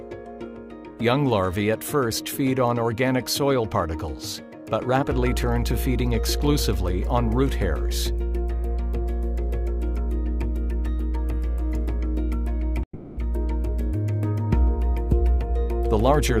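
At 12.83 s the audio breaks off for about 0.36 s. The last sound is stretched into a fading buzz, then a brief near-silence follows before audio resumes at 13.19 s with that stretch gone. This is likely a long network dropout, with roughly 340 ms never arriving.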